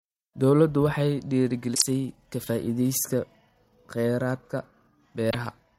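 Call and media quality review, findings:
Short disturbance in the speech at 1.71–1.82 s, just before "ka faa'iidaysiga"; a shorter one at 5.29–5.35 s. Damaged data in a compressed stream, at the decoder input. Corrupted bytes were misread as frame data, sync was lost, and output recovered once the next valid frame header was found. Bursts of about 110 ms and 54 ms.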